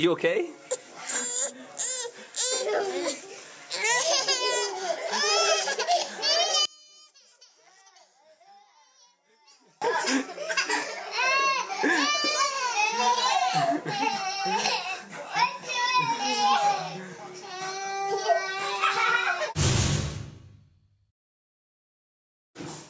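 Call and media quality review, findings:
6.65–9.82 s: level drops by about 30 dB to a faint residue, then recovers. Likely one channel inverted: reversed polarity cancels shared content when summed to mono. Waveform shows a deep envelope notch; spectrogram nearly blank below the 8 kHz call-processing ceiling.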